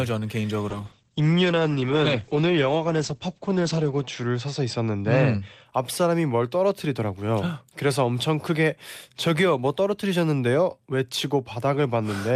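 From 0.69 s to about 5.71 s the speech turns rough and watery and loses its top end, sounding muffled, with the dullest and coarsest stretch lasting about 3.4 s before clarity returns. This is a call bitrate drop: the encoder was pushed from 40 kbps down to 10 kbps, so each frame was coded far more coarsely, and the audio bandwidth shrank from 20 kHz to 8 kHz, stripping the highs until the rate climbed back.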